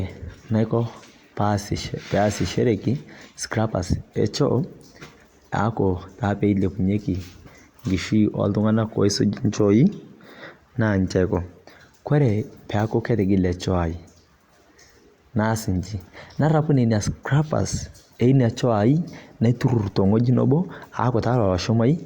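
No technical faults can be heard anywhere in the recording, and the signal holds steady throughout.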